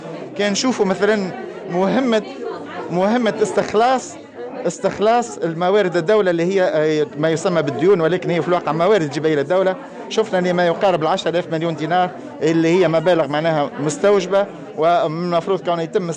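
No technical faults can be heard anywhere in the audio, and the signal holds steady throughout without any disturbance to its level, timing or continuity.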